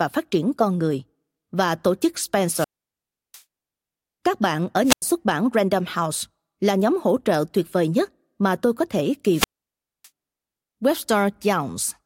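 Wireless microphone squelch dropouts occur at 2.44–3.43 s, 4.83–5.02 s and 9.30–10.09 s. Each time the FM radio link fades, a brief rise of hiss is heard, and then the receiver's squelch mutes the speech into near silence for 700 ms, 93 ms and 606 ms respectively.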